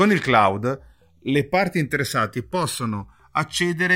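Throughout the speech, the channels are drifting apart. The two sides run on separate clocks, off by roughly 300 parts per million. Their offset grows to about a millisecond. In mono, comb notches sweep slowly through the spectrum, heard as a gradual flanging.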